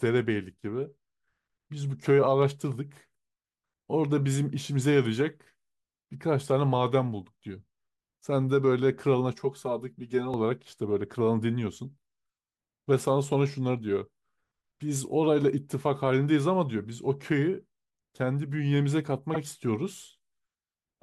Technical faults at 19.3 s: repeated frames

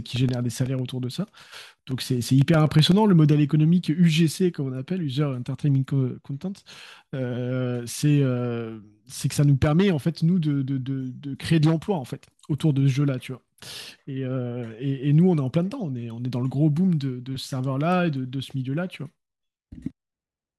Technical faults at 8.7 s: none

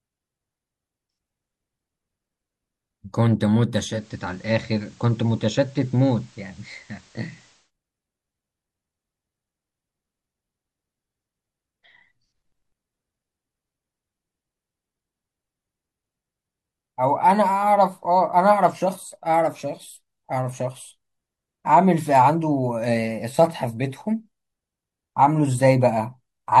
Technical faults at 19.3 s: none

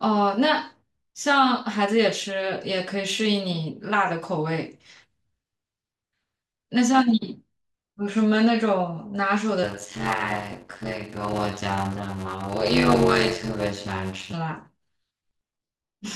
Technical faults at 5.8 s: none

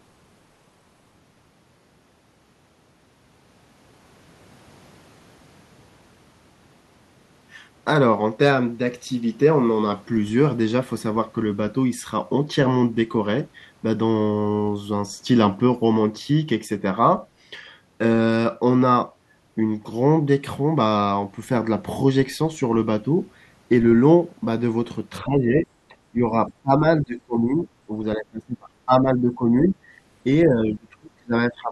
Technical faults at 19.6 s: none

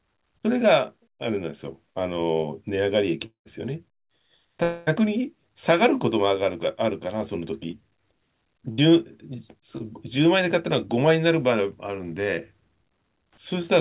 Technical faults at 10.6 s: none

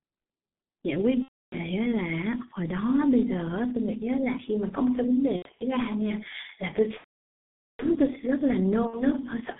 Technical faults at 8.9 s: G.723.1 codec; VoIP packet loss concealed by the speech codec

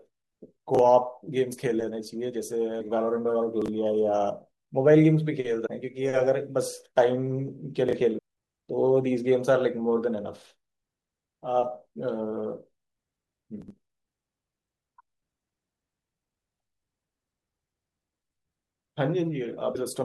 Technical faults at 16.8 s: none

